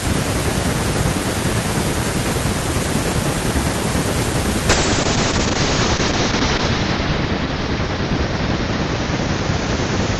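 At 4.7 s a call bitrate drop sets in and lasts to the end of the clip. The call's bandwidth estimate collapsed, and the encoder was forced to spend far fewer bits, which fits a fall from around 64 kbps to about 7 kbps. The audio band narrows from 20 kHz to 8 kHz, so the speech turns muffled, with a rough, watery texture from the coarser coding. The worst stretch holds for about 2 s with no recovery.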